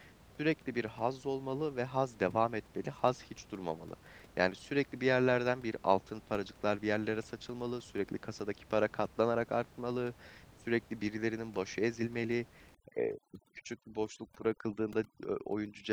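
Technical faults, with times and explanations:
12.75 to 15.93 s, overdone noise removal: right at the end, the room noise, which sits about 25 dB under the speech before this, drops away and breaks up, leaving little twinkly specks behind. The suppressor is pushing individual frequency bands way down whenever they look like its noise estimate, and the softer parts of the speech fall into that range too, so they get stripped out along with the noise.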